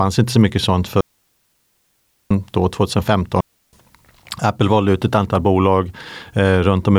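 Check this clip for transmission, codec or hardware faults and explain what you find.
Two digital wireless dropouts break up this speech. The first runs from 1.01 to 2.31 s, right after "inte så mycket sånt", a hole of 1.3 s; the second runs from 3.41 to 3.73 s, lasting about 0.32 s. In each, the receiver lost too much of the radio data stream and muted its output with a very brief fade, leaving clean near-silence. Unlike an analogue wireless dropout, neither gap has a hiss or noise burst at its edges, and unlike packet-loss concealment, nothing synthetic fills it.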